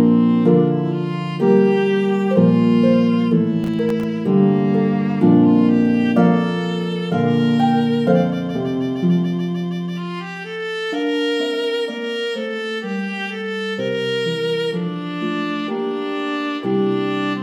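From 3.64 to 4.04 s there is a burst of processor overload crackle. For about 0.4 s the processing could not keep up. Around ten of its very short buffers, each in the region of a millisecond and a half, missed their deadlines and went out as silence. Each dropout has hard edges, so the sound carries a gritty, tearing crackle across that stretch, and it stops as soon as the load eases.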